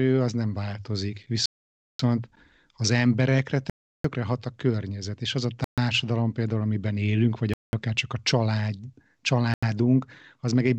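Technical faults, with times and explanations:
1.46–1.99 s, 3.70–4.04 s, 5.64–5.78 s, 7.54–7.73 s and 9.54–9.63 s, Bluetooth stall: the speech stops dead for about 0.54, 0.35, 0.13, 0.2 and 0.09 s, then carries on. This is likely the headphones' buffer running empty while interference delayed packets. Unlike packet-loss concealment, the gap is true silence with no smeared or buzzy fill.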